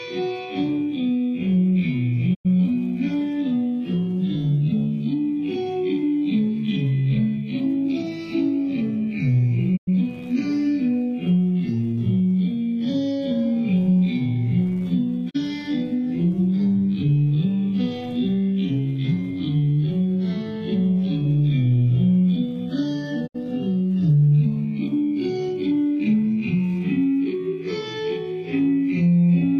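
A digital broadcast dropout mutes the audio four times: 2.33–2.47 s, 9.76–9.89 s, 15.29–15.36 s and 23.26–23.36 s. Each time, the receiver lost the signal and muted, with 20 ms fades. The gaps of 96, 96, 32 and 64 ms fit whole 32 ms frames.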